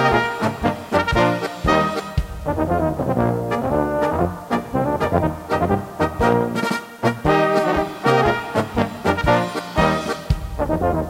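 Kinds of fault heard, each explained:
Low bit depth without dither: A grainy, rough distortion runs through the whole clip and changes character with the sound, harshest on quiet passages and decays, where low-level detail breaks into a gritty buzz or sputters between a couple of steps. The error sits roughly 30 dB below the signal and tracks it, which points to a signal likely rounded to about 8 bits with no dither applied.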